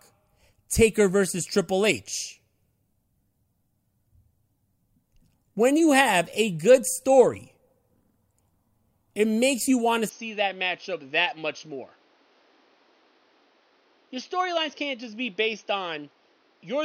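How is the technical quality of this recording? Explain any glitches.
One fault affects the speech. Input switched to a poorer device, from 10.09 s to the end. The recording likely jumps to another microphone or headset profile with a narrower band, cutting everything above 6.4 kHz. Without any gap, the sound turns dull and somewhat quieter, over fresh background noise roughly 35 dB down.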